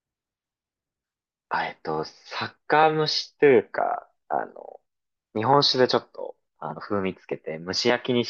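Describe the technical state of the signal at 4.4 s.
At 4.4 s the speech signal is intact, with no fault present at that moment.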